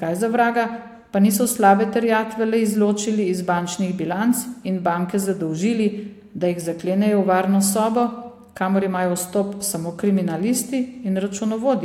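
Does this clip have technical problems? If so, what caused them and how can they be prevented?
No, the speech signal stays steady and intact throughout, with nothing in it that points to a recording, processing or transmission problem.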